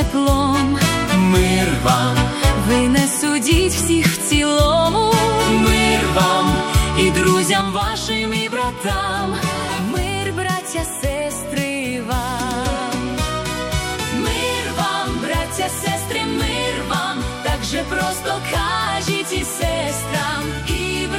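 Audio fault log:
7.61 s to end, one channel drops out: the sound falls abruptly by about 6 dB and stays lower to the close, likely because one stereo channel was lost before the mono sum.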